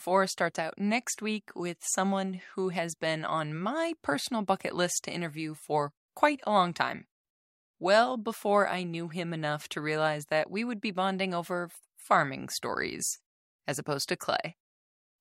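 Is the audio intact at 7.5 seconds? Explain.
Yes, the speech at 7.5 seconds is intact, with no audible fault at that moment.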